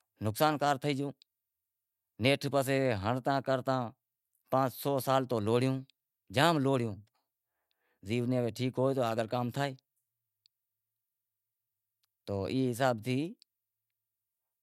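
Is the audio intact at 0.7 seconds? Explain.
Yes, at 0.7 seconds the speech plays through intact, with no dropout, click, distortion or other fault at that moment.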